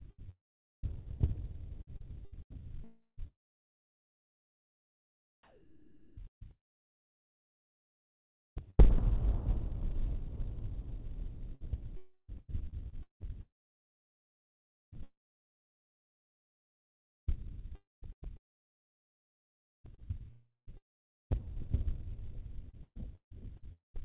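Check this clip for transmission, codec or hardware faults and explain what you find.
The recording of everyday sounds has two recurring faults: choppy gating with synthetic background, and three gaps where the sound breaks off. It is also band-limited, with nothing above 4 kHz, which fits narrowband G.711-style call coding.

Sound chopped by the voice detector, 0.02–2.63 s, 5.43–14.97 s, 13.41–17.29 s, 17.75–23.99 s and 20.31–21.32 s. The sender's activity detector likely kept switching transmission off, so quieter stretches, up to about 3.7 s per section, became comfort noise.

Long network dropout, 2.84–3.20 s, 11.97–12.30 s and 23.73–23.96 s. Audio likely stopped arriving for about 0.22 to 0.34 s each time. The receiver stretches the last sound into a fading buzz, then brief silence of about 0.07 to 0.16 s, before sound resumes with that portion missing.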